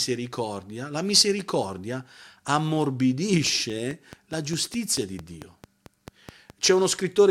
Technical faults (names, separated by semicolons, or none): train of clicks